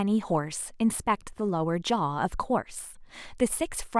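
No technical faults can be heard anywhere in the recording; the signal stays continuous and intact throughout.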